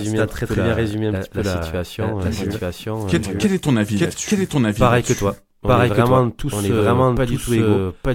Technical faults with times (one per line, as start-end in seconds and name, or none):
0.00-8.14 doubled audio track